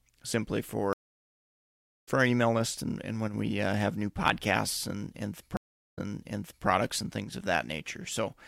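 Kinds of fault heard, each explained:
Stream reconnect: The speech cuts to silence and picks up at a different point, as when a broken connection forces the player to reconnect and restart decoding mid-stream. From 0.93 s a gap of about 1.14 s ends at "for our email list", with roughly a second of material skipped. After "new podcasts and and" at 5.57 s, a 0.4 s silence is followed by a jump back of 0.7 s, so that stretch is heard twice.
One channel drops out: The speech abruptly drops by about 6 dB for a moment, then snaps back. This likely happens because one stereo channel vanished briefly, so the mono sum keeps only half the shared signal. It occurs for about 60 ms at 3.28 s, between "email list and and" and "we uh have new", and again for about 80 ms at 7.24 s.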